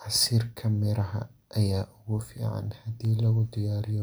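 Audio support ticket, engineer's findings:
Signal path nominal: speech, no dropouts, discontinuities, or distortion detected, so no component fault to log.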